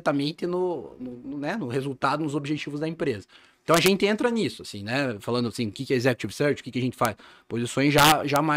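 Integer overflow: loud speech peaks pushed the signal past the largest integer value, which wrapped to the opposite sign instead of limiting, causing harsh cracks at 3.74–3.88 s, 7.05 s and 7.98–8.36 s.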